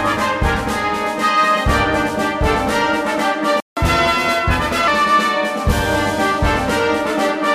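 The player likely starved of data or had its thread blocked at 3.60 s, a playback stall: the audio drops to silence for about 0.17 s, resuming at 3.77 s. To recover the lost time the player then resamples its backlog in a catch-up at higher speed, running 1.15 times faster from 3.77 s to 4.88 s, so the sound is hurried and raised by about two semitones before settling back.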